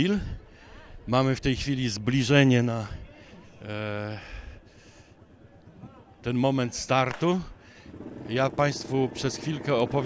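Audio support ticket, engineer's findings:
Resampler restarted on every block, 7.9 s to end. Regular ticking at 10 Hz, only where signal present. 48 kHz to 16 kHz conversion run per 100 ms block, filter state dropped each time, so every block edge gets a small glitch.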